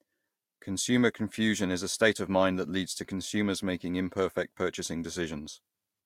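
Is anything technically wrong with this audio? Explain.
No, nothing technically wrong can be heard here.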